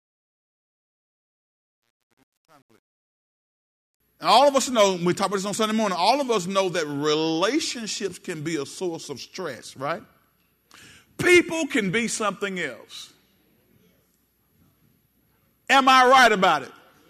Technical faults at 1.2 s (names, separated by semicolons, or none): truncation distortion on a fade